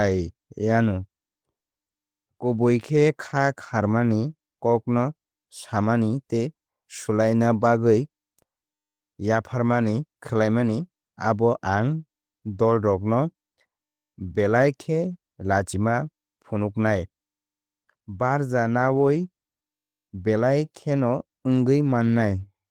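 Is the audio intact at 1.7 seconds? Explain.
Yes, the audio is intact at 1.7 seconds, with no fault audible at that moment.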